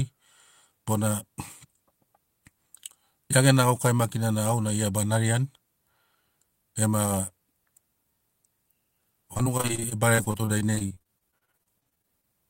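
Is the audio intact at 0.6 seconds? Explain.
Yes, the audio is intact at 0.6 seconds, with no fault audible at that moment.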